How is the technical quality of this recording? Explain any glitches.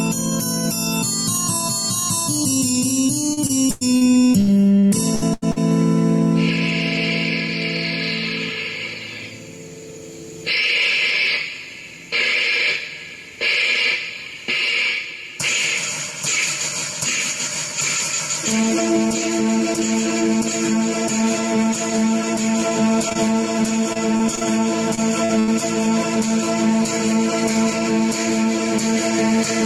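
The recording has two kinds of network glitch, each tied to lost audio packets.

From 3.33 to 5.58 s and again from 23.93 to 25.49 s there is repeated packet loss, which gives a robotic sound. Holes up to 100 ms long recur in quick succession, and each is patched by extending the previous sound. This makes the audio choppy. Unlike an isolated dropout, the damage persists across the whole stretch, with about a fifth of the first span synthesised.

At 23.09 and 23.13 s there is short concealed packet loss. Two adjacent 20 ms chunks went missing, and the receiver filled them by continuing the prior sound before blending back in. The result is a single brief smear or wobble, not a sustained robotic texture.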